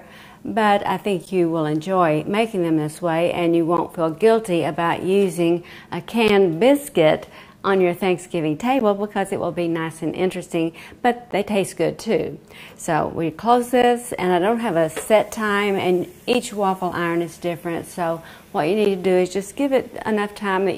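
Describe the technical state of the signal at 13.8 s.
At 13.82 s there is a gap between chunks. The audio was handled in 2.5-second chunks, and at this join about 13 ms of silence sits between the two instead of a seamless handoff. No material is missing, since the sound picks up where it stopped, but the flow is broken by a brief, hard-edged hole that drops abruptly to silence and snaps straight back in.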